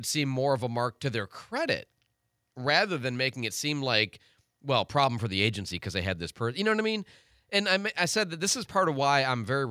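Nothing in this speech recording points to a technical fault: the signal runs continuously without any audible disturbance.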